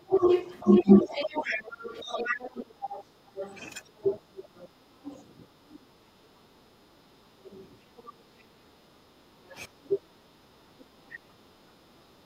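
Other side's voice leaking through, 0.09 to 5.79 s: a second voice sits nearly as loud as the talker, likely loudspeaker playback the echo canceller failed to subtract from the microphone.

Speech suppressed in double talk, 0.64 to 1.2 s: the talker's voice dips deeply, by about 20 dB, for a fraction of a second, likely because the canceller attenuated everything while both sides spoke.

Background gated by the echo canceller, 1.72 to 1.76 s: the room sound drops by about 8 dB for a brief moment as the canceller clamps the microphone during playback.

Background gated by the echo canceller, 3.1 to 3.37 s: the room tone falls by about 16 dB and then returns when the suppression releases.

Speech suppressed in double talk, 3.9 to 4.14 s: the talker dips again, by about 20 dB, likely through the same double-talk attenuation while the far side was active.

Background gated by the echo canceller, 4.42 s to the end: the background drops by as much as about 11 dB, for around five seconds in total, as the canceller turns the microphone down.

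Other side's voice leaking through, 7.46 to 8.09 s: a faint scrap of a second voice remains, far below the talker, likely uncancelled echo from the loudspeaker.

Speech suppressed in double talk, 9.88 to 10.17 s: the talker drops by about 20 dB for a fraction of a second, likely because the canceller again turned down both the talker and the loudspeaker echo together.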